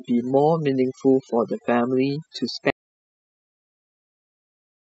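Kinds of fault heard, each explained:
Overdone noise removal: The noise reduction was set far too strong, so every frequency band sitting near its noise estimate is pushed down or switched off, and the quieter parts of the voice are cut along with the noise. The background becomes near silence dotted with twinkling specks. On a spectrogram the gaps show scattered isolated dots, and the voice's harmonics look patchy and eaten away at their edges.
Audio dropout to silence: At 2.70 s the sound cuts out mid-flow and never returns. Everything from there to the end is total silence with no room tone, most likely because the input was lost through a disconnected device, a failed link or a mute while recording carried on writing silence. The waveform becomes a flat line, and the spectrogram goes completely blank. Whatever speech followed is gone.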